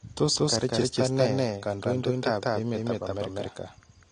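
A speech recording in which every passage is heard twice: a second full-band copy, roughly as loud as the first, trails it by about a fifth of a second throughout, with no decay or room colour to it. This doubled audio track is likely the same signal mixed in again from a slower capture path or an edit holding two copies out of step. Throughout, the sound is also dull, with plainly audible codec damage and nothing above 9.8 kHz. That is likely AAC compression, consistent with AAC-LC at a low bitrate around 32 kbps lowering the cut-off.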